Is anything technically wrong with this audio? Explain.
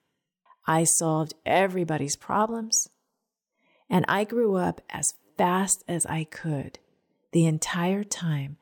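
No, the signal holds steady throughout, with no dropouts, glitches or level problems to be heard at any point.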